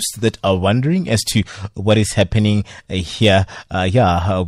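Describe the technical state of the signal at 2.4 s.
At 2.4 s the speech has a harsh, crackly edge on its louder moments, the sound of hard clipping, which runs from about 1.89 s to 2.50 s. The signal there is driven roughly 3 dB past what the stage can pass, so peaks are sliced flat, adding high harmonics.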